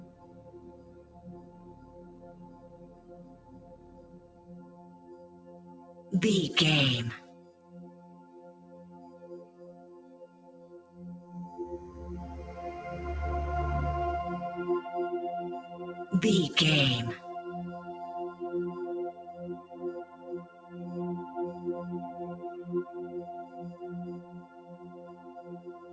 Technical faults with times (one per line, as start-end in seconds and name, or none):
0.00-25.93 noise suppressor applied to music or sounds
0.00-6.12 sound cut by the noise suppressor
7.20-10.98 sound cut by the noise suppressor
20.49-20.69 sound cut by the noise suppressor
24.24-24.69 sound cut by the noise suppressor
25.06-25.93 sound cut by the noise suppressor